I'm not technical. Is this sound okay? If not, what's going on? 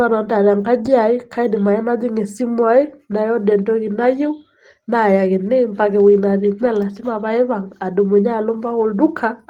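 Yes, this recording of speech is technically sound, with nothing going wrong in how the audio was captured or played back.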